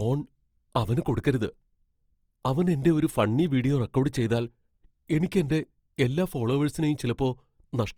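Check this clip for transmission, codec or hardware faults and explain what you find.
One codec fault runs through the whole recording, most likely Opus compression. The speech carries a grainy, rough texture throughout, with voiced sounds turned plainly noisy rather than swirling. That fits the music-mode encoder keeping each band's energy but filling starved bands with folded copies or noise, at a bitrate around 24 kbps. On a spectrogram, content reaches up to a cutoff near 20.4 kHz with few holes, and the upper bands look smeared and noise-filled instead of finely harmonic.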